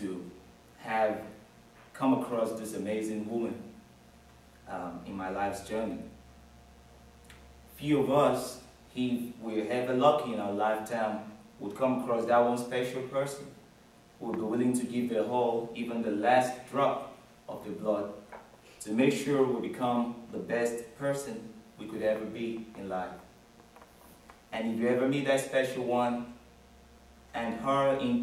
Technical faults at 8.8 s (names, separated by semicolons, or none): mains buzz